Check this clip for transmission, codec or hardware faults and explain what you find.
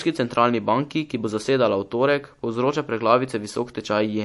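The speech carries audible codec damage from start to finish, most likely MP3 compression. Nothing sounds above 11.3 kHz, a hard ceiling pointing to a bitrate near 48 kbps. Weak spectral detail flickers between frames, giving a watery swirl on sibilants, which a plain low-pass filter would not produce.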